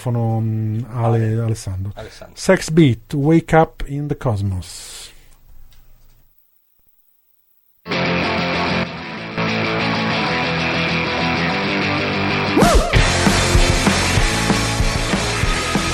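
Two sudden gain jumps cut the level, by about 7 dB at 3.88 to 4.10 s and about 10 dB at 8.84 to 9.38 s. The sound and its background noise drop together in one step, not a ramp, which sets this apart from a fade or compressor action. The likely cause is a gain change applied without smoothing.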